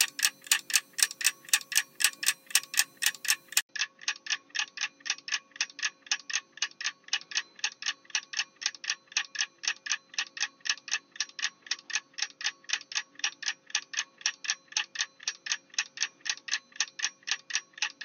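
At 3.61 s the sound drops out for 80 ms, then returns duller and a few decibels quieter, with nothing above 6.4 kHz and faint new background noise. This is likely an input switched to a poorer device. A simple filter change wouldn't bring the gap, level shift and different noise floor.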